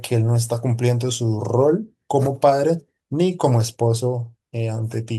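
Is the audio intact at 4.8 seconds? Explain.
Yes, the speech at 4.8 seconds plays through intact, with no dropout, click, distortion or other fault at that moment.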